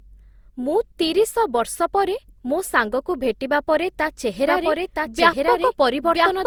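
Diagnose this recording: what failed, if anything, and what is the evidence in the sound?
Codec stage: the speech sounds swirly, smeared and hollow throughout, with blurred attacks, even though content reaches about 20.2 kHz. This points to generation loss, likely from re-encoding through Opus at 64 kbit/s around seven times. Each pass adds fresh quantisation noise, unlike a single low-bitrate encode.

From 4.47 s, right after "ସାଙ୍ଗକୁ ଭେଟିବା ପରେ ତା'", and on to the end, a doubled audio track appears: a full-band copy about as loud as the original, trailing by roughly a second. It starts abruptly, with no decay or room colour, which rules out echo or reverb.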